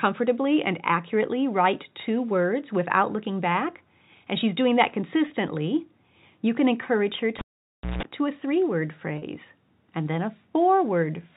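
A speech recording carried over G.711 mu-law telephone coding, which band-limits it to below 4 kHz. It has two bursts of packet loss with pitch repetition, at 5.28 to 5.30 s and 9.18 to 9.22 s. The receiver bridges each gap by looping the last pitch period, giving a briefly held, buzzy tone. The first gap is 20 ms, which fits one lost packet. The second is 40 ms, pointing to two in a row. From 7.39 to 8.03 s a cable is pulled and plugged in. A pop is followed by about 0.59 s of near silence, then roughly 0.17 s of 60 Hz mains buzz as the plug tip makes partial contact, and a second pop when the signal returns.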